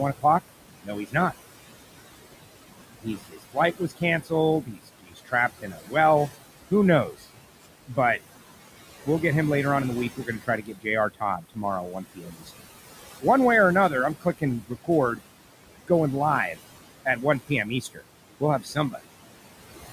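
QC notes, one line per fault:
Throughout: Wi-Fi interference. A steady tick repeats every 102.4 ms, just under ten times a second, well below the speech at roughly 25 dB under it. A nearby Wi-Fi radio's beacon is being picked up and rectified by the audio circuitry, turning each transmission into a click. On a spectrogram it appears as thin vertical broadband lines at a perfectly regular spacing. On the waveform it appears as a comb of small spikes that continues through pauses.
Throughout: noise suppressor artifacts. The room noise, which sits about 14 dB below the speech, is pulled down by about 17 dB in the gaps and then swells back under each phrase. The suppressor works frame by frame, judging each frequency band as noise or speech and attenuating it accordingly. On a spectrogram this appears as a patchy, blotchy noise floor that pumps with the speech. The waveform shows a floor that drops in pauses.
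0.83–1.34 s, 3.02–7.97 s, 10.1–13.25 s, 13.9–15.22 s, 16.53–19.01 s: speech cut by the noise suppressor. In these stretches, quiet consonants and word endings are swallowed, pushed down by about 17 to 18 dB. The loss is brief in the first and fourth spans. In the second and third it adds up to around a second and a half, and in the last to under a second. The suppressor mistook low-level speech for background noise. A spectrogram shows holes where high-frequency consonant energy should be. The waveform shows tails clipped short.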